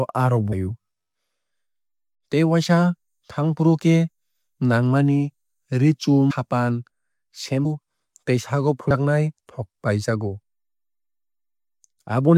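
Compressed frames skipped at 0.51, 6.30 to 6.32, 7.64 and 8.90 s. Missing frames make the speech jump ahead by about 150 to 400 milliseconds.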